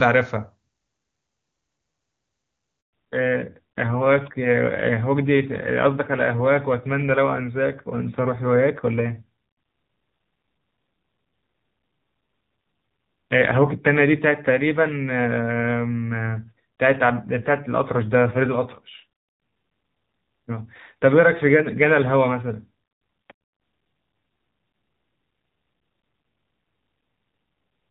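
A speech recording from a phone call opens in clear HD Voice on the AMR wideband codec, with little or no audible codec damage. At 2.81 s a handover gap cuts in: the call switches networks, no speech frames arrive, and the sound dies away almost at once into 120 ms of silence. That silence shows as a blank vertical strip on a spectrogram and a flat line in the waveform. From 2.93 s to the end there is a fallback to narrowband: everything above 4 kHz vanishes, leaving the upper part of the spectrogram empty, and the speech turns duller and rougher. That sound points to a drop from AMR-WB to AMR-NB at around 7.4 kbit/s.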